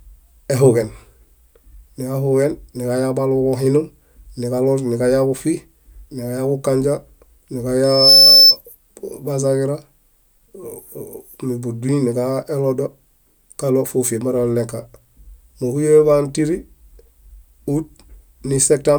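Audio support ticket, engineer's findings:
Mic-to-speaker acoustic loop exceeding unity gain at one frequency. Loudspeaker feedback squeal, 7.84–8.57 s. Single tone at 5.3 kHz swells out of the speech over roughly a third of a second, peaks around 10 dB above it, then stops at 8.57 s, loop broken or gain pulled. Probable component: PA/monitor chain, mic too close to or aimed at a speaker, too much gain near 5.3 kHz.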